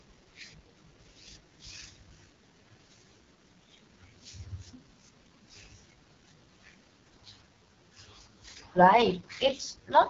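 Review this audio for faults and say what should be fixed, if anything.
The speech runs through AMR wideband (HD Voice) coding for its whole length, and the damage is heavy. The rough, raspy texture points to the codec's lowest mode, which fits about 6.6 kbit/s: too few pulses drive the vocal tract model, so voicing turns gritty. A spectrogram shows nothing above 7 kHz, with blurred, smeared harmonics below 6.4 kHz. Record or transcode at 12.65 kbit/s or higher to prevent this.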